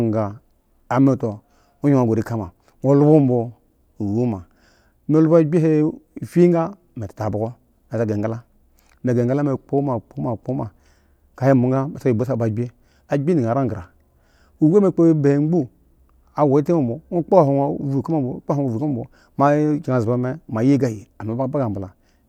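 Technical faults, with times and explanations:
No technical fault can be heard anywhere in the speech. There is no moment in the recording that calls for a time or an explanation.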